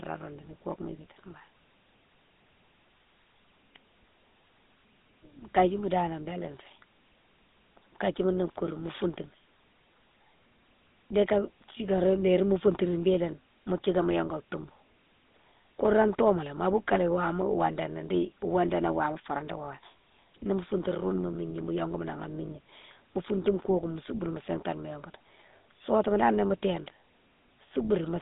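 Throughout the speech, GSM full-rate codec damage is plainly audible. The codec rebuilds the voice from a coarse pulse train, leaving a buzzy, gravelly roughness, which fits its 13 kbps mode. The band runs from 200 Hz to 3.7 kHz. Nothing passes above 3.8 kHz.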